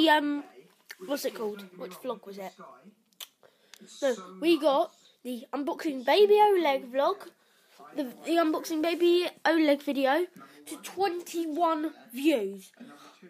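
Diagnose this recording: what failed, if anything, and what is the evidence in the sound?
Nothing failed here: listening through, there are no faults to trace back to any stage of the chain.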